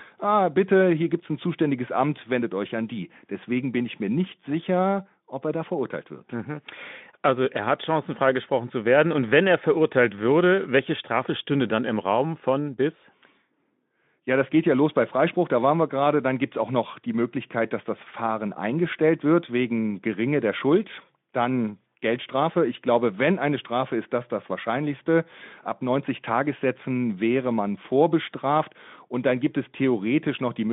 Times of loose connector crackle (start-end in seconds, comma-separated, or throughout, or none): none